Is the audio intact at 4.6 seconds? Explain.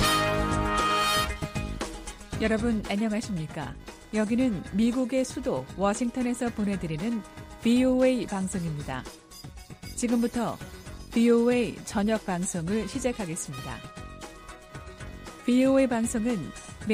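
No. At 4.6 seconds the audio carries computer activity noise, which runs through the whole clip rather than appearing as a single event. Load changes in the processor, graphics card or mouse disturb the ground that the audio circuit shares with them, injecting a buzzy, chirping pulse train at roughly 500 Hz, sitting roughly 30 dB below the signal. Its rises and falls follow what the computer is doing, not the sound itself.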